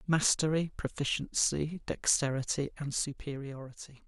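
From 2.64 to 3.7 s the speech takes on a ticking, a zipper noise that rides on it as the level drops by roughly 10 dB. The gain moves in unsmoothed 2 dB steps, about seven a second, and each jump leaves a small click.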